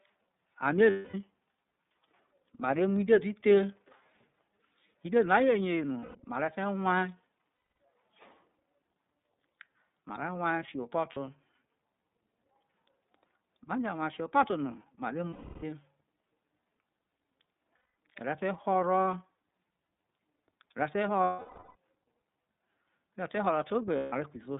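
The whole recording runs through the iLBC codec, which keeps only about 150 Hz to 3.7 kHz, so the speech sounds boxed-in and thin, with a plainly rough, slightly synthetic edge. That fits a narrowband VoIP coder working on 30 ms frames.

On top of that there are lost iLBC frames at 0.9, 6.01 (just before "mare te"), 7.68, 11.13, 15.29 (right after "fiho̠ epo̠to no mare"), 17.77, 21.24 and 23.97 s. Each time the decoder fills the hole by repeating the last pitch cycle with some noise mixed in, so you hear a brief held, buzzy vowel. The longest, at 21.24 s, stretches to about half a second and fades out. The voice snaps back clean right after each one.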